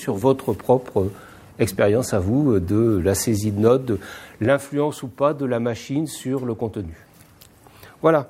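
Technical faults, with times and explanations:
No technical faults can be heard in this clip. There is nothing here that needs a time or an explanation.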